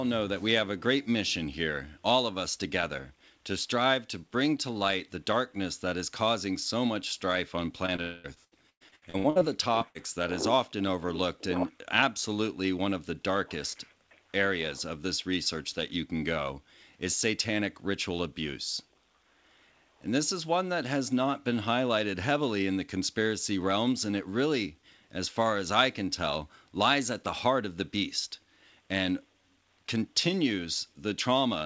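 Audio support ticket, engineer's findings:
Repeated packet loss (robotic sound), 7.86–9.43 s: packets lost or late over and over, with roughly a dozen holes, the longest 110 ms, each patched by extending the last sound. About a third of the stretch is concealment, so the audio turns choppy, with pieces missing.

Long network dropout, 8.02–8.26 s, inside that stretch: a continuous run of about 0.22 s heard as a fading buzz or hiss that never drops to silence before audio resumes with that part gone. Likely cause: the network delivering nothing for that span while the receiver kept extending.

Short concealed packet loss, 9.79–9.83 s: about 20 ms reached the decoder too late. The receiver bridged the hole from the preceding sound and then blended back into the real signal, heard as a brief smear or wobble.

Burst of packet loss, 9.89–9.97 s: packets lost, about 60 ms in total. The concealment extends the last sound and lowers it as the gap runs, giving a short fading buzz or hiss. 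Audio resumes further on with that piece missing.

Call path: nothing above 8 kHz, which points to G.722 at 64 kbps.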